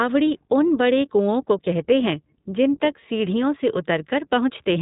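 iLBC codec damage runs throughout this speech clip: nothing above about 3.8 kHz survives, and each 20 ms frame's excitation is coded independently, which fits a rate near 15.2 kbps. The result is plainly audible roughness, a slightly synthetic edge over narrowband, muffled speech.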